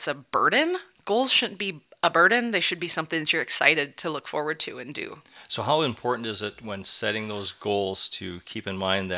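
No technical faults can be heard anywhere in this recording. The speech continues without interruption or audible damage from its first moment to its last.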